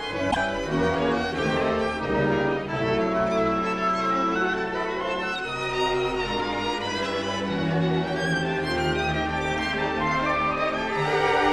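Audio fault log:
0.28–0.37 s, damaged data in a compressed stream: a short stretch of the encoded stream arrives corrupted, so the decoder misreads those frames, loses sync and hunts for the next valid header, producing a brief glitch of about 95 ms.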